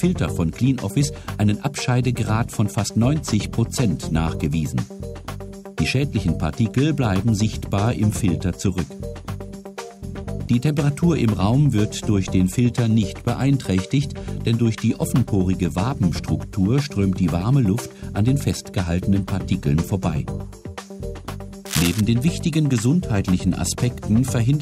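From 21.66 to 22.02 s a burst of cable scratch noise appears: dense, irregular crackling and rustling sitting not far below the sound, roughly 5 dB under it. This is likely a worn cable or connector being moved, its contact resistance fluctuating rapidly.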